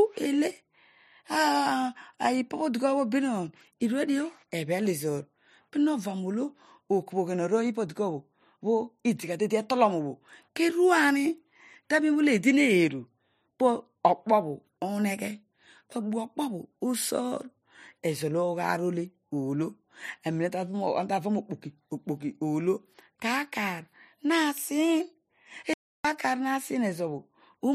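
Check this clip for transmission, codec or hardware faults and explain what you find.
One fault: an audio dropout to silence from 25.74 to 26.05 s, about 310 ms, likely a lost input or mute while recording continued, writing silence. Unlike a gate or fade, it cuts abruptly to silence with no room tone.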